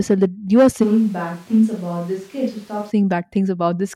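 Right after "that you are", from 0.85 to 2.89 s, it's a switch to a distant microphone, likely a dropped close mic: roomy, thin, about 5 dB quieter, with more background noise.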